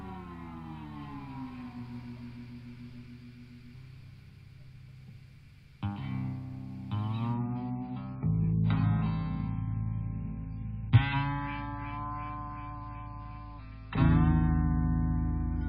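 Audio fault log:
7.34 to 15.68 s, adaptive stream at a lower bitrate: the quality drops suddenly with no gap, unlike a rebuffer, as the stream moves to a lower-bitrate version. Nothing remains above 5.2 kHz and codec artefacts rise. This points to roughly 96 falling to 16 kbit/s AAC.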